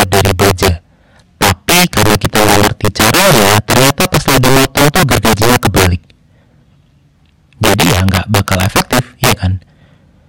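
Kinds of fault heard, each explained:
Integer overflow: the speech is driven about 10 dB past full scale, and instead of being limited, peaks wrap to the opposite extreme. Around seven percent of samples flip across the full range, producing violent cracks on peaks throughout, far harsher than clipping.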